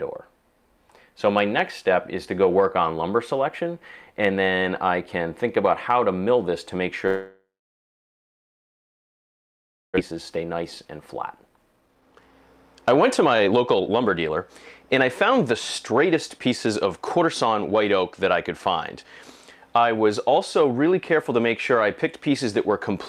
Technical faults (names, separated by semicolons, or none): long network dropout; jitter buffer speed-up